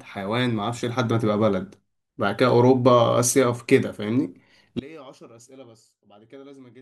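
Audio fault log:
4.79 s to end: audio dropout to a faint residue. Speech abruptly drops to a faint residue roughly 25 dB down, likely a lost feed. The waveform shrinks sharply and the spectrogram dims.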